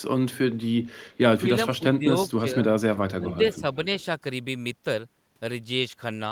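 An echo canceller on the far loudspeaker side likely failed to remove all of its own playback, so a bit of it leaked back into the call as an echo leak. From 1.1 to 1.18 s, a delayed copy of the speech returns about 389 ms after the original, very low, around 40 dB below the speech. It is a brief ghostly repeat trailing the talker rather than a sustained second voice.

Speech is suppressed in double talk four times. The echo canceller likely could not tell its own talker from the loudspeaker echo while both were active, and it turned the speech down along with the echo. The level of the speech dips by up to about 10 dB at 1.34 to 1.44 s, about 15 dB at 1.68 to 2.15 s, about 15 dB at 2.38 to 2.59 s, and about 10 dB at 3.18 to 3.64 s. These dips make the talker sound as if pulled away from the microphone in patches.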